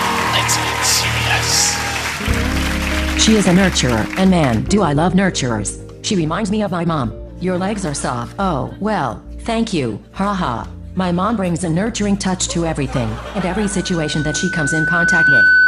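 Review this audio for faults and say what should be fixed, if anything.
Loudspeaker feedback squeal runs from 13.44 s to 15.67 s. The microphone picks up its own loudspeaker, so a 1.5 kHz tone builds over roughly two seconds to about 10 dB above the sound. It appears as a bright horizontal spectrogram line and a swelling waveform envelope. Lowering gain, moving the microphone away from the speaker, or notching 1.5 kHz prevents it.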